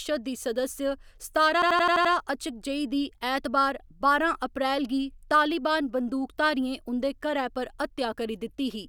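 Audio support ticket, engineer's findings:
Machine-gun stutter at 1.62–2.13 s: one 85 ms slice of speech repeats six times at 11.7 Hz. System hang loop, where the host or audio driver stalled while the output hardware kept replaying its ring buffer, which fits a 4096-sample buffer.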